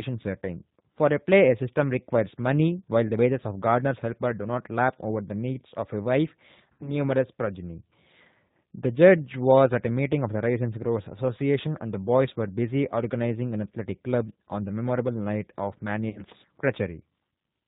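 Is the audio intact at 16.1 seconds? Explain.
No. From 16.09 to 16.21 s there's VoIP packet loss concealed by the speech codec: about 60 ms went missing, which fits two dropped packets. The decoder stretched its last pitch and filter with falling gain, so the sound smears into a fading buzzy tone or coloured noise and stays weak or distorted briefly afterwards.

Underneath that, the whole clip runs through the G.729 codec at 8 kbit/s, and the damage is plainly audible: everything above 4 kHz is gone, and rebuilding the speech from a vocal tract filter and a few pulses per frame leaves it rough and slightly synthetic.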